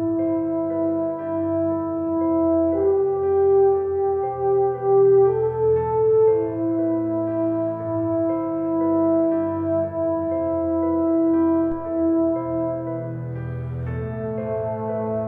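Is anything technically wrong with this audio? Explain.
Yes. At 11.72 to 11.95 s there is a phantom power thump: a supply switching on a live input steps through the coupling capacitors, giving a deep thump peaking about -23 dBFS and decaying within 53 ms.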